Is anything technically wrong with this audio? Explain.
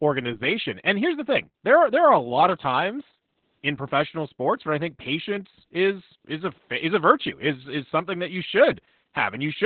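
Yes. Opus voice compression runs throughout the speech. The codec has squeezed it into narrowband SILK coding, which fits a very low bitrate of around 8 kbps: content above 4.4 kHz is simply gone, and the linear-prediction excitation is coded so coarsely that the damage is heavy. The result sounds muffled and telephone-like, with a hoarse, slightly robotic buzz rather than a clean, open voice.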